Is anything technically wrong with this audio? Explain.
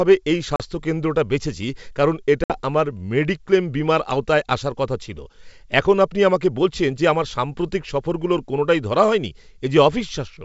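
Yes. There is packet loss on an ADPCM call, twice: near 0.56 to 0.62 s, with about 40 ms of silence, and near 2.44 to 2.59 s, with about 60 ms missing. The gaps suggest a couple of packets, then about three. After each hard-edged hole, the decoder's predictor and step size disagree with the sender's. Speech returns slightly distorted. It settles within tens of milliseconds.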